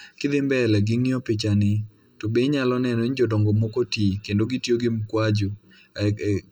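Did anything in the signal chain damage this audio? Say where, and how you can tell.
Yes: channel delay (comb filtering) runs through the whole speech clip, pointing to a fault where the stereo pair is folded to mono. One channel arrives late by roughly 0.7 ms. When the two copies are summed, their shared content cancels at evenly spaced frequencies: the first notch falls near 700 Hz, with further dips near 2.1 kHz and 3.5 kHz. This gives the voice its steady hollow, phasey colour.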